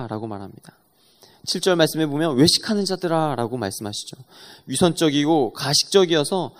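A short speech recording with no technical fault to point to. Nothing in it calls for a time, a value or a cause.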